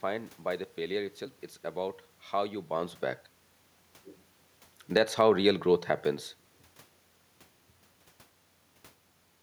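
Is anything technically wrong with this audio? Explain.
Yes. Between 4.81 and 5.19 s the automatic gain control falls: having judged the input too loud or its background noise too strong, it reduces its gain by about 4 dB over those 0.38 s, and the speech settles to a lower level. What separates this from the talker moving, heard around 2.5 s and again near 8 s, is that the room noise drops with the voice. A change in distance alters only the voice, while a gain change lowers everything the microphone picks up.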